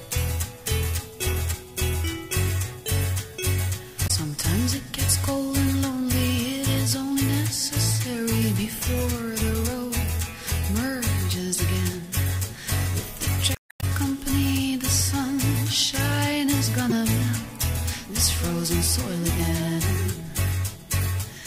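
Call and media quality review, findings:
Damaged data in the compressed stream: brief blips at 4.06–4.11 s and 16.90–16.92 s, a longer fault at 13.52–13.84 s. Decoder hits bad bytes, misreads frames, loses sync and hunts for the next header. Worth checking the transport or stored file.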